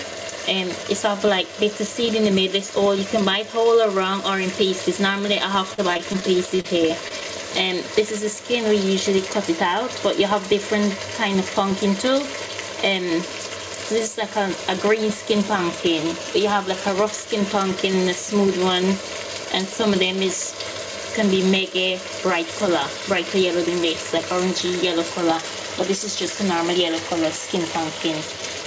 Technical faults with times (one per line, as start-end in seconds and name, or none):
5.74-6.66 repeated packet loss (robotic sound)
7.08-7.12 short concealed packet loss